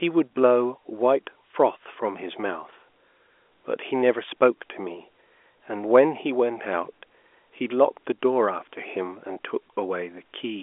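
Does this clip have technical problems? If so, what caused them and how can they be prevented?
No, there's nothing to fix here: this is ordinary G.711 telephone coding doing its normal job, so the sound sits in the usual 300 Hz to 3.5 kHz phone band with nothing above about 3.8 kHz, just as a landline call should.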